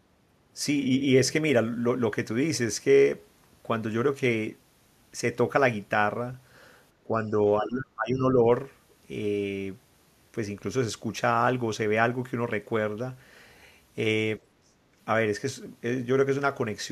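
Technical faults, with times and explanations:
7.07 to 7.32 s, 7.62 to 8.46 s and 14.38 to 14.77 s, speech suppressed in double talk: the voice sinks in uneven pieces. The first dip is slight, the second falls by about 25 dB over most of a second, and the third falls by about 35 dB. The likely cause is an echo canceller turning the near talker down while the far side speaks.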